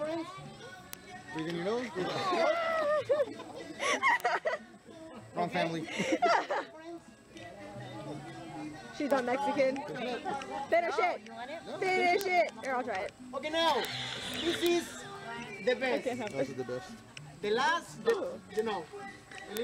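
From 0.12 s to 19.57 s, a steady train of sharp ticks runs under the audio, roughly seven per second and about a hundred in all, their strength varying from one to the next. These are word clock ticks. The receiving device runs on its own clock, which drifts from the sender's by something like 150 ppm. Each time the two clocks slip past each other, a single sample is dropped or repeated, leaving a brief discontinuity that is heard as a tick.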